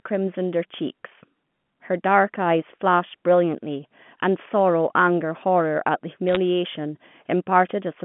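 Between 6.29 and 6.37 s, a short burst of bit errors on a digital phone line puts a cluster of sharp ticks over the speech. With a small fraction of bits flipped, each error corrupts a single sample, and a hit on the sign or a high-order bit becomes an isolated click. Packet loss would instead leave gaps or smeared repeats. Here the speech underneath carries on intact, band-limited to the 150 Hz to 3.4 kHz telephone range, which fits A-law telephone coding.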